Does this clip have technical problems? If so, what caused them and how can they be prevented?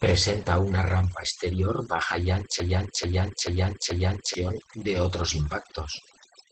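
Yes, three of them. First, there's overdone noise removal across the whole clip. The noise reducer was pushed so hard that any frequency band close to its idea of the noise gets pulled way down or switched off, and the softer parts of the speech go along with it. That's why the background sits in near silence with little twinkling specks. To prevent it, back off the reduction strength and accept a bit of residual hiss.

Second, there's Opus voice compression, also running the whole way through. The codec is in its speech-oriented SILK mode at wideband, predicting the voice and coding the excitation coarsely, and the damage is plainly audible: the speech sounds muffled, a little hoarse and slightly robotic. Nothing gets through above about 8.6 kHz, and overall the sound fits a low bitrate around 12 kbps. To prevent it, give the encoder more bitrate so it can use a wider band and finer coding.

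Third, there's a broken-record loop from 2.6 s to 4.34 s. Right after "rampa exterior baja y", a fragment of about 0.44 s plays four times back to back, identical each time, and the speech resumes at "de otros". Whatever should have been heard in that stretch is simply gone. The likely cause is a stall in the player, encoder or stream that kept resending the last chunk it had buffered. To prevent it, add stall detection and enough buffering headroom so a hiccup produces a gap or a resync rather than a repeat.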